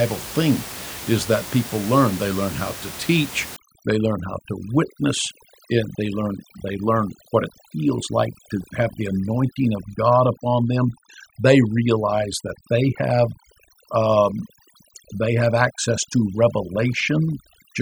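Speech, with about the first three and a half seconds sounding natural, room noise sitting roughly 14 dB under the voice. From 3.56 s to the end there's overdone noise removal: the reduction is set far too hard, so individual frequency bands get pulled right down whenever they drift near the estimated noise floor. The room hush drops and breaks up into little twinkly artefacts, and the quieter parts of the voice get eaten too.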